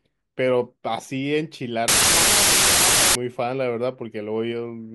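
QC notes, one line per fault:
1.88–3.15 s, wrong sample width: the speech sinks under loud, harsh noise, faintly audible and running 1.5 times fast, raised in pitch. 16-bit samples are read as packed 24-bit, so most values join mismatched bytes and only some keep the true top bits.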